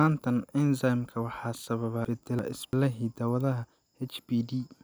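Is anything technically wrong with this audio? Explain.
Yes. Between 2.05 and 2.73 s the speech has chunks out of order: two adjacent blocks of about 341 ms each play swapped, one arriving a chunk late. No audio is lost, but three hard joins produce a brief jumbled passage.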